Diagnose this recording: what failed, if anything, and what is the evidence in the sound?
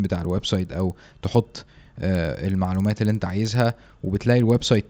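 The resampler restarted on every block, a sample-rate conversion fault: throughout the speech, faint ticks repeat at 20 Hz, fitting 50 ms blocks converted from 16 kHz to 48 kHz in isolation. Unlike buffer underruns, nothing drops out, and unlike hum, the ticks vanish in pauses.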